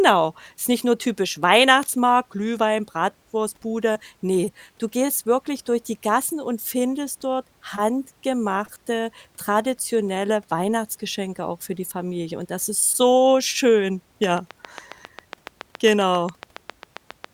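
From 14.24 s to 17.25 s, right after "das ist so schön", a train of clicks ticks evenly at about 7.3 per second, some twenty similar pops about 10 dB above the speech and continuing through pauses. That steady spacing sets it apart from random crackle, and it likely comes from nearby-equipment interference.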